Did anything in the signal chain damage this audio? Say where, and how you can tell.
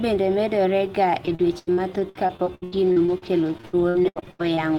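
Yes, at the network stage: repeated packet loss (robotic sound) runs from 1.25 to 4.59 s of this speech. Over that span there are 23 dropouts, the longest 83 ms. Each is papered over by stretching the preceding sound, so the audio turns choppy with pieces missing. On a spectrogram you'd see frozen, smeared harmonic bands repeating across the holes. The waveform would show a stuttering, copied-looking envelope, with concealment covering about 28% of the stretch.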